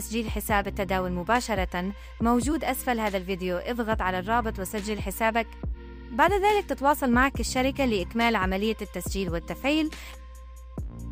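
A steady mains hum at 60 Hz runs under the sound from start to finish, sitting fairly high at roughly 15 dB below the signal. A ground loop or a transformer close to the cabling lets the power line bleed into the audio path. What separates it from low rumble, such as wind or handling noise, is its fixed pitch: it never drifts or swells with movement, and it holds a steady tone locked to the line frequency.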